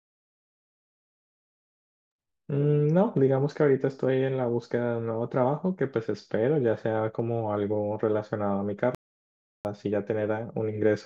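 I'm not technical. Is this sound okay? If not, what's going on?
No. At 8.95 seconds there is a playback stall: the player most likely ran short of incoming audio, or was briefly held up by something else on the device, and had nothing to send to the speakers. The speech simply cuts out mid-flow and the line goes silent for about 0.7 seconds, until 9.65 s, when the audio resumes once the player catches up.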